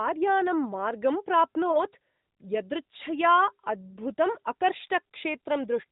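At 1.72 to 1.80 s the speech briefly dips and warbles. This is a lost AMR speech frame, about 20 ms of audio. The decoder bridged the gap by repeating the previous pitch and vocal tract settings at lower gain. The narrowband sound around it suggests AMR-NB at roughly 12.2 kbps.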